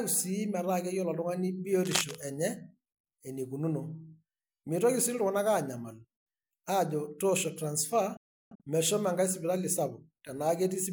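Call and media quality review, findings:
Cable scratch noise, 1.84–2.15 s: dense, uneven rustling burst over the speech, only a little below speech level. Likely a worn cable, connector or control moved in use, its contact resistance fluctuating rapidly and injecting noise.

Digital broadcast dropout, 8.17–8.61 s: speech mutes with a 3 ms fade. Holes total about 384 ms over a 427 ms span, longest 341 ms. Receiver lost sync or rejected corrupted frames and muted until valid data resumed. Content in the gaps is unrecoverable.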